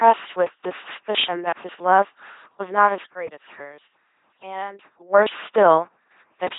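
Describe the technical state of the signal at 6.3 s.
At 6.3 s the speech is still under the LPC-10 vocoder damage present across the whole clip: a synthetic filter driven by either a buzz pulse train or noise, heard as a mechanical robot voice with nothing above 3.8 kHz. The hard voiced-or-unvoiced switching, not mere muffling, fits a 2.4 kbit/s stream.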